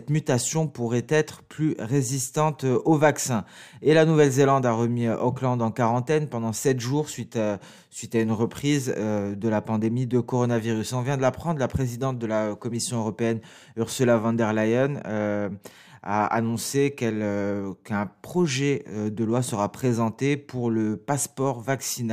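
Nothing here stands out as a fault; the audio just runs along with nothing catching the ear at any point.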